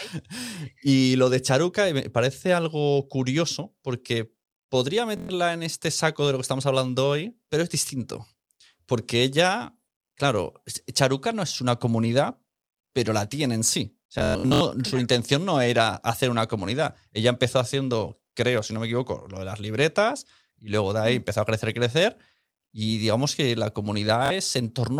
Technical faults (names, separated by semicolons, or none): Bluetooth stutter